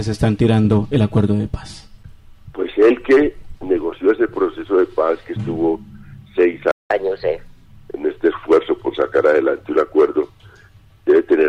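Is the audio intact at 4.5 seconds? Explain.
Yes, at 4.5 seconds the audio runs on without any dropout, click, glitch or other break.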